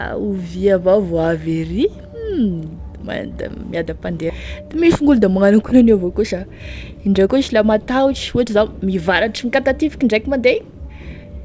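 At 4.30 s there's a skip ahead right before "misy gn'olo da magnano": about half a second of speech just vanishes, dropped while later audio was already queued, so playback leaps forward and the two sides butt together with no gap at all.

From 6.05 to 8.54 s, just after "gn'olo da magnano akonan'io", a jitter buffer speed-up kicks in. The buffer had too much queued, so it kept trimming out pitch-period-sized slivers, around a third of a second in total. Speech runs about 11% fast at unchanged pitch and sounds rushed. The band stops at 8 kHz, which fits a G.722 call path.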